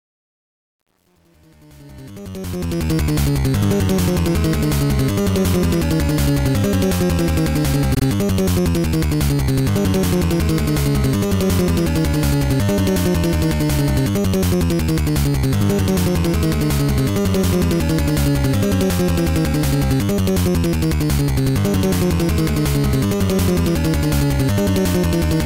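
Truncation distortion on a fade runs from 0.00 to 2.91 s, during the opening fade-in. The quiet early stretch, worst from 0.00 to 2.18 s, turns gritty because the gain stage rounds the waveform into coarse steps without dither, which fits roughly 9-bit resolution.

Repeated frames appear at 7.93 to 8.03 s. A 96 ms stretch of sound, consistent with two 48 ms blocks, is played again, producing an audible stutter. The clip is 96 ms longer as a result.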